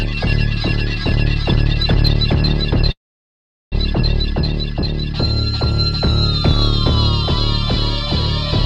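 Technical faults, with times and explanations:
2.91 to 3.74 s, call audio freeze: the sound stops moving forward and the last instant hangs on as a brief buzz or hiss that dies away almost at once, leaving about 0.76 s of silence before the audio resumes exactly where it broke off, with nothing skipped. The likely cause is packets held up in transit until the jitter buffer emptied, so the receiver padded the wait, pushing everything after it about 0.8 s later.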